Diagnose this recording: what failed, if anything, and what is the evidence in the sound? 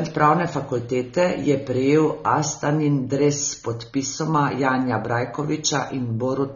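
The codec stage failed: AAC compression, likely AAC-LC at a rate that fits about 24 kbps, dulls and smears the speech throughout, leaving sibilants and held vowels warbling and fizzy. Coarse quantisation leaves spectral holes and substitute noise. A plain low-pass would only dull the sound, with no warble.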